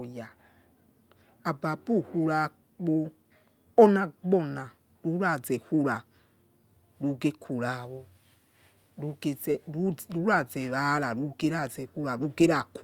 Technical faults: none

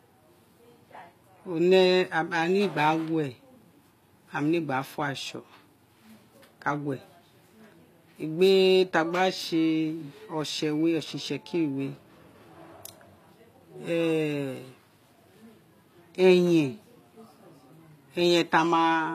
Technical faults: HE-AAC compression

